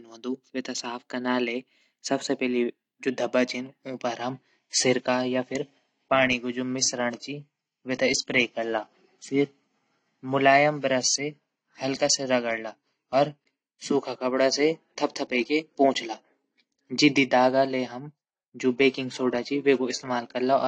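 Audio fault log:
4.23–20.68 s, adaptive stream at a lower bitrate: from 4.23 s to the end, the speech abruptly loses its top end, with nothing above 10 kHz, and gains a swirly, smeared codec texture. This fits a stream switching from roughly 96 to 32 kbit/s AAC after the connection slowed. The switch is instant and leaves no silence or stutter, unlike a buffering dropout. The added artefacts also set it apart from a plain low-pass filter.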